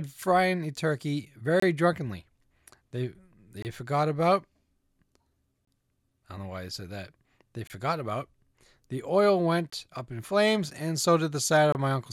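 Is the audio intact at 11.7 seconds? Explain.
No. At 11.72 to 11.75 s the speech breaks off in a gap between chunks, a hole of silence about 25 ms long. The audio appears to have been delivered in 2.0-second chunks, and this join was not butted cleanly against the next piece. Instead, silence was inserted before playback resumed. Nothing is removed from the speech; it is simply pushed later. The result is a brief dropout with abrupt edges on both sides.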